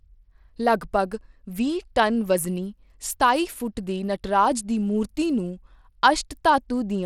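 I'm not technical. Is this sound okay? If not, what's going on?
No, not quite. All the way through, the speech has a gritty, clearly crunchy edge, and the very top of the sound is missing, with nothing above about 17 kHz. That points to Bluetooth SBC compression as the likely cause. It's the basic codec Bluetooth uses: it splits the sound into a handful of frequency bands and packs each one roughly, so the highest bands get dropped and the rest pick up that rough, grainy texture.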